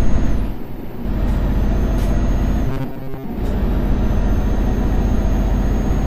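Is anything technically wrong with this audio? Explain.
Yes. From 2.68 to 3.24 s the sound turns into a rigid, metallic buzz pitched at 134 Hz, which keeps tracking the rough shape of the audio but loses its natural detail. This is robotic sound from repeated short buffers. The likely cause is audio arriving too seldom, so playback fills the gaps by looping the last fragment, about 7.5 ms long, over most of that stretch while the real material is skipped. That repetition imposes the fixed buzz.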